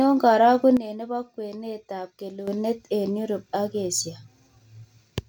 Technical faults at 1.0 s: sudden gain jump

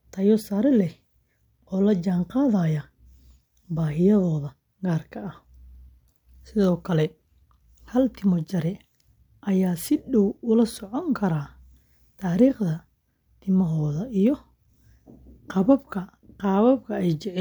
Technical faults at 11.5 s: none

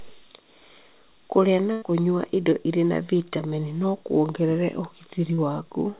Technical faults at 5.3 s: short concealed packet loss

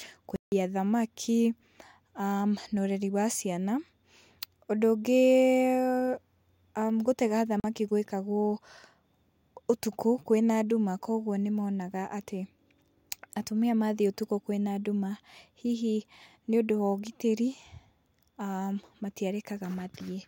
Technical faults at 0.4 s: block of digital silence

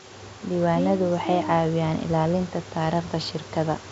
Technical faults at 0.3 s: none

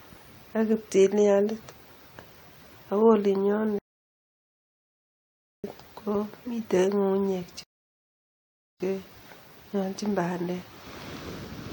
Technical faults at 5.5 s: rebuffering stall

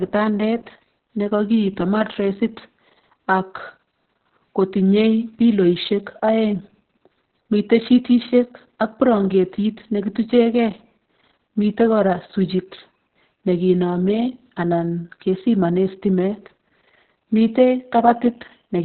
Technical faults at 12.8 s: Opus voice compression

